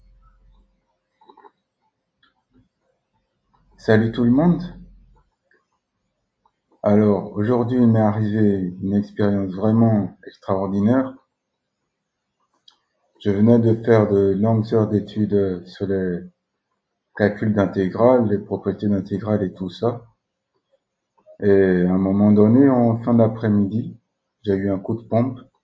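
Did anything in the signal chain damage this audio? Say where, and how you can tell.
Yes. The damage comes from the call processing stage: sound cut by the noise suppressor, twice. From 0.26 to 0.63 s the level sinks by about 7 dB, and from 10.1 to 10.46 s by about 20 dB, each dip lasting a fraction of a second. The suppressor misread steady or decaying sound as noise and attenuated it. Unlike a network dropout, nothing goes abruptly silent, and sharp onsets still come through. The call's microphone processing, with nothing above 8 kHz, is working normally.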